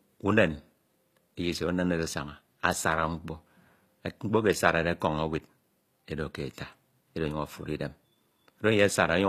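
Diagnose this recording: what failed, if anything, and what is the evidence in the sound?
The codec stage failed throughout: s sounds turn gritty and lispy, likely from HE-AAC compression at a rate fitting 24 kbps. Spectral band replication copies lower bands upward, so a spectrogram shows repeated, blocky treble texture with nothing above 15 kHz.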